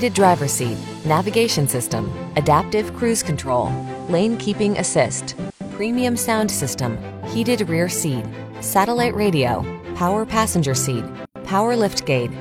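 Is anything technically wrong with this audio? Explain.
Yes. From 3.27 to 6.06 s, digital radio blending to analogue: the receiver cross-fades over about 0.4 s to FM, so faint hiss appears.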